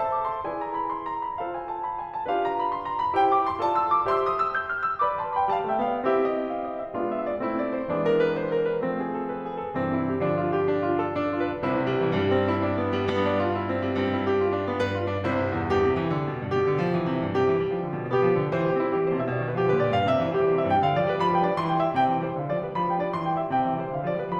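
No technical fault can be heard anywhere in this music recording, and the signal holds steady throughout.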